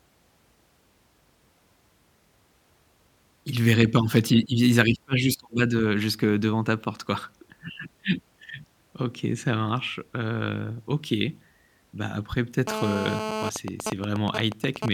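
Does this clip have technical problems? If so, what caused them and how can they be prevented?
Yes. GSM phone buzz runs from 12.67 to 13.50 s. A 2G handset in a call nearby was transmitting radio bursts about 217 times a second, and the audio circuitry rectified those pulses into the signal path. The result is a harsh, rasping 217 Hz buzz full of harmonics, sitting about 6 dB below the speech and unrelated to it. Keeping mobile phones switched off or well away from microphones, cables and preamps prevents this.

GSM signalling bursts follow from 13.56 to 14.89 s. Here a phone was in a call, but its user had gone silent, so it sent only short groups of bursts at the same 217 Hz rate. Once rectified, these produce even ticks with a longer buzz twice a second, roughly 5 dB below the speech. Shielded, properly grounded cabling and RF-filtered inputs help, but distance from the handset is the surest prevention.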